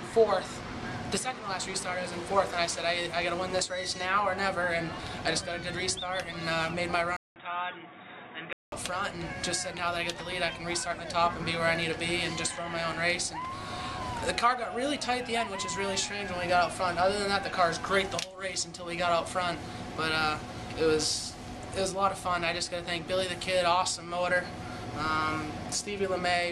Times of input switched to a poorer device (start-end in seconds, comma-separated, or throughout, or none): 7.16-8.72